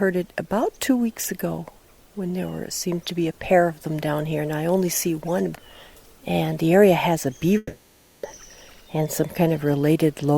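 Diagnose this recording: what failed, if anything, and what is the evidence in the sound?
The fault sits at the network stage. From 7.57 to 8.26 s the sound turns into a fading buzz that fills the whole gap, with no clean silence. It then resumes further on. About 0.66 s is missing. The likely cause is a long network dropout, masked by concealment.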